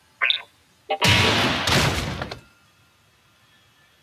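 A noise suppressor designed for speech stays active across the whole clip, acting on sound it was never meant to process. It treats sustained, steady material and decaying tails as noise and pulls them down, while sharper onsets pass largely intact. The gain it applies moves by around 10 dB, so the level pumps and the texture thins instead of holding steady.

The sound is cut by the noise suppressor in three stretches. The first runs from 0.0 to 0.21 s, the second from 0.45 to 0.89 s, and the longest from 2.4 s to the end. In each, the suppressor misjudges the material as noise and drops it by about 11 dB at the deepest point. Held portions sag and their decays are clipped short, leaving the sound hollow and receding until the next attack pushes through.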